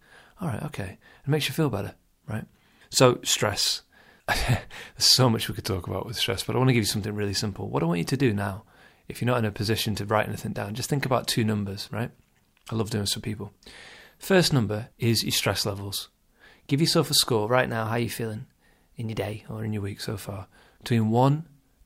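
Speech, and twice the playback jumps off speed. From 5.61 to 6.69 s everything runs about 5.6% slow and drops roughly a semitone (around 99 cents), then returns. From 17.47 to 19.68 s it goes the other way, 5.6% fast and about 94 cents sharp. Speed and pitch move together in a single step each time, which likely points to a drift correction step, where clock-matching software abruptly changed the rate to refill or drain its buffer.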